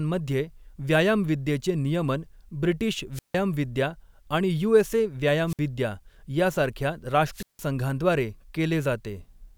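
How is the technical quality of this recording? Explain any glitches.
The speech is broken up three times by wireless microphone squelch dropout, at 3.13 to 3.35 s, 5.47 to 5.59 s and 7.32 to 7.64 s. Each time the radio link from the analogue FM transmitter weakens, a rush of hiss builds, and the receiver's squelch gate shuts the output off. That leaves holes of near silence of about 157 ms, 59 ms and 165 ms before the speech comes back.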